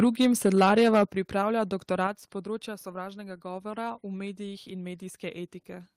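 Right from the start, 0 to 1.03 s, the speech has a harsh, crackly edge on the louder syllables. That's microphone overload. The input is running hot, peaking about 7 dB past full scale, so the waveform tops get flattened against the converter's ceiling. A fair chunk of the audio, something like 7 percent of samples, ends up squared off, and that's where the gritty distortion comes from. The likely cause is a mic input gain set far too high.

Then the level drops in two clean steps: microphone volume stepped down, at 1.05 s by about 8 dB and again at 2.07 s by about 5 dB. Each time the speech and the background fall together, in one jump rather than a fade. The first step lands right after the distorted stretch ends, which points to the call software likely reacting to the clipping and pulling the device input down, then trimming it once more a second later.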